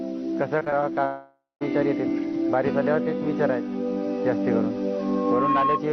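Between 0.59 and 0.91 s, repeated packet loss (robotic sound) sets in: several short packets fail to arrive, none longer than 16 ms, and each hole is patched by extending the preceding sound. About a quarter of that span is filled this way, giving a choppy texture with small pieces missing.

From 1.05 to 1.63 s the audio breaks off for over half a second, most likely a long network dropout. The last sound is stretched into a fading buzz, then about 0.18 s of silence follows, and the sound resumes without the missing portion.

At 4.99 s a loudspeaker feedback squeal begins: the microphone is picking up its own loudspeaker, and a 1.1 kHz tone swells over roughly half a second until it sits about 5 dB above the rest of the sound, ringing on as a squeal until 5.82 s.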